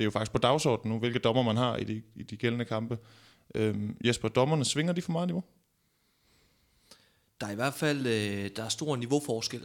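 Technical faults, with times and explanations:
No technical faults, with times and explanations, are found in this speech clip.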